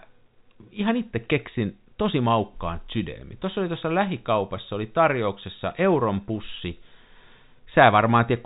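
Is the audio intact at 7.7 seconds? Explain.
Yes, the speech at 7.7 seconds is intact, carried cleanly through the G.711 telephone coding with its band limit near 3.8 kHz and no dropout, click or distortion at that point.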